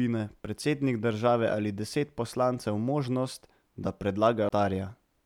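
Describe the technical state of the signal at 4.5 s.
At 4.49 s the speech drops out in a tick and a mute of about 20 ms: a CD skip, where the laser jumped to another turn of the disc's spiral.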